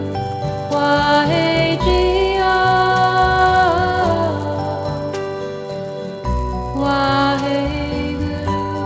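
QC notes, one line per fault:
throughout, resampler restarted on every block: each 10 ms block of audio was rate-converted in isolation, so the converter's filter had no real neighbouring samples at either edge and left a small error at every boundary, which fits a 48 kHz to 16 kHz conversion. With blocks this short the errors merge into a 100 Hz buzz rather than separate ticks. Unlike mains hum, the buzz drops out completely whenever the sound stops and comes back with it.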